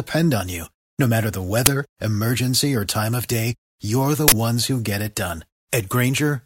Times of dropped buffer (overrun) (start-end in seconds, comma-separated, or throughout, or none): none